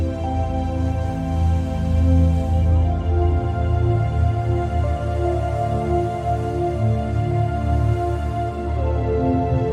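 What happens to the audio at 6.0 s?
Nothing goes wrong at 6.0 s; the audio carries on intact through that moment.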